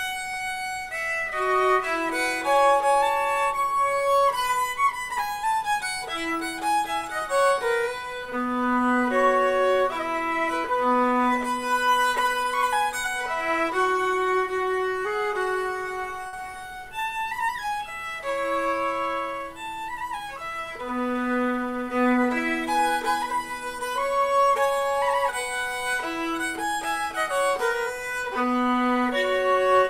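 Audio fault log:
16.27–16.35 s, short stall from a late packet: a packet arrived about 57 ms late, the jitter buffer ran dry, and the receiver held the last sound until it came, so nothing drops out but one moment drags with a faint buzz or dip.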